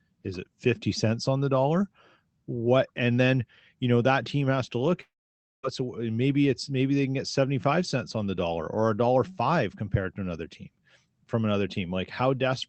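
Speech over what sounds like an Opus call, top end stopping near 8 kHz. From 5.01 to 5.65 s there's a long network dropout, likely: the last sound smears into a fading buzz, then near-silence, and speech resumes with that chunk gone.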